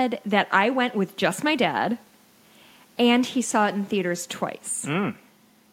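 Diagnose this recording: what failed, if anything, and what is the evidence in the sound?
Nothing in this recording points to a failure at any stage between capture and playback. No moment in the speech carries audible evidence of a problem.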